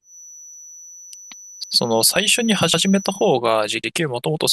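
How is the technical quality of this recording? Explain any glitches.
Two faults affect the technical quality of the speech: a steady high tone in the first part and three short stutters.

From the start to 3.39 s, a thin whistle at 6 kHz sits behind the speech, roughly 20 dB below it and swelling and fading slowly in level. This is a feedback whistle, and its likely cause is a loudspeaker-to-microphone loop held right at the edge of feedback. The tone stays put and never grows. That sets it apart from runaway howl, which climbs quickly in level, and from electrical hum, which sits far lower in pitch.

At 0.54 s, 1.64 s and 3.84 s, a 100 ms piece of the speech plays twice, heard as a brief click and stutter. These are overlapping chunks: the audio was handled in blocks of about 1 s, and each block began before the previous one finished, so the overlap repeats at the join. Unlike a dropout, nothing is lost. 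The same sliver is heard again.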